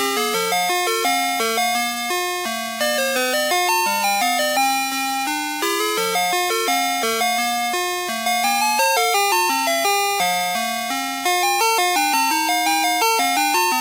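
Everyday sounds, with nothing technically wrong to report.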